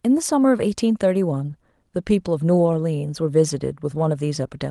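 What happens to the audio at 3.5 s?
Nothing goes wrong at 3.5 s: the speech there comes through intact, carried by the Opus call path with its ordinary coding and a top end that stops around 12 kHz.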